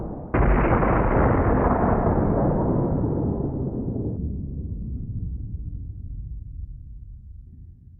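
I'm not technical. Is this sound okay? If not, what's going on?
No. From 4.17 to 7.47 s there's a section at the wrong speed: it plays at about 0.71 times normal, so everything drops roughly seven semitones and drags. Likely a clock mix-up during editing or playback.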